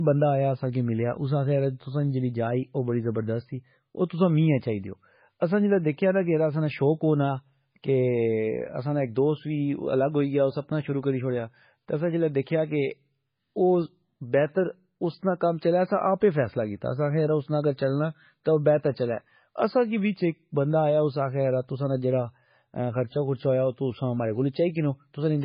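From start to finish the speech sounds muffled and boxed-in, with nothing above 5.1 kHz, so sibilants lose their edge and the sound carries the watery smear of heavy compression. This is likely low-bitrate audio saved at a high bitrate: the band limit and artefacts point to a very low-bitrate MP3 pass, perhaps around 16 kbit/s, later re-encoded as a much larger MP3 that cannot bring back what the first encoding discarded.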